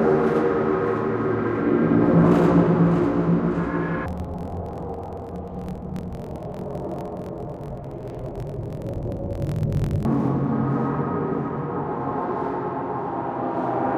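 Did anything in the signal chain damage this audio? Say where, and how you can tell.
Yes. Between 4.06 and 10.06 s the sound drops an octave and turns doubled and choppy. This is an interleaved audio read as planar fault at the sample-format conversion stage. Each block of alternating left and right samples is split in half, with one half read as left and the other as right. Both play at half speed, so the pitch falls 12 semitones while the pace holds. The seams repeat at about 43.1 Hz, every 23.22 ms, which fits a 1024-sample block.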